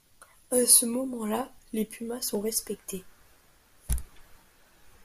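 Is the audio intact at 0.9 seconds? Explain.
Yes, the speech at 0.9 s plays through cleanly, with no dropout, click, distortion or other fault at that moment.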